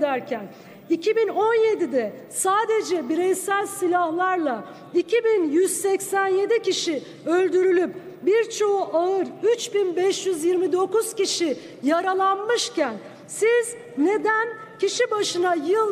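No technical faults can be heard anywhere in the recording, and the signal holds steady and continuous throughout.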